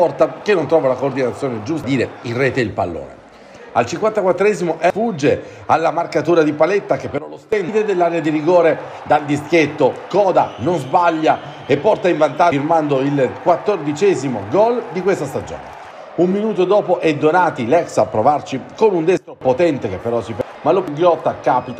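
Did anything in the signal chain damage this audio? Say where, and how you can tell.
Yes. At the codec or storage stage, whole compressed frames of about 93 ms went unplayed at 1.84, 4.90, 7.69, 12.52, 20.41 and 20.88 s. Each skips roughly 0.7 s (half a second at the last).

A sudden gain jump, likely an unramped digital gain change, drops sound and noise together by about 14 dB from 7.18 to 7.53 s, and by about 20 dB from 19.17 to 19.41 s.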